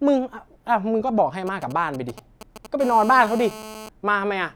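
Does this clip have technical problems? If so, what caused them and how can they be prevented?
Yes. GSM signalling bursts appear from 1.47 to 2.67 s: a galloping dit-dit-dit of brief 217 Hz buzzes, roughly 15 dB below the speech, as a nearby 2G phone signals and the audio circuit rectifies its radio pulses. Keeping phones away from the recording chain or switched off prevents it.

A GSM phone buzz follows from 2.80 to 3.89 s: a steady, raspy 217 Hz buzz rich in harmonics, about 16 dB below the speech, produced as a 2G phone in a call transmits in bursts 217 times a second and the circuit demodulates it. Shielded cabling and distance from phones prevent it.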